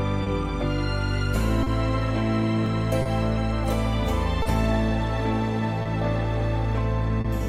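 Clock drift between sender and receiver runs through the whole clip: the sender's clock is about 2 percent slow, so the receiver's buffer keeps draining and timing hiccups recur.

Short stalls from a late packet occur at 0.23, 1.63, 3.02, 4.42, 5.82 and 7.21 s. Each time the buffer runs dry, the last sound is stretched by 30 ms, then continues with nothing lost, heard as a brief hold.

At 2.66 s there is a small jump ahead, most likely a dropped buffer (overrun) where around 10 ms was overwritten before being read.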